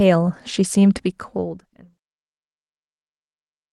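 There are no technical faults to describe here; the speech simply fades out smoothly from about 1 s to 1.99 s, with no click or hard edge.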